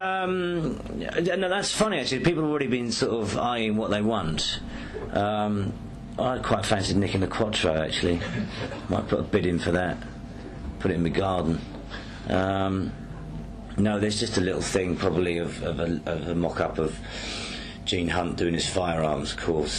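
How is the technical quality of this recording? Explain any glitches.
Nothing here sounds like a glitch: the sound carries on steadily without any dropouts, clicks or other technical hiccups to point out.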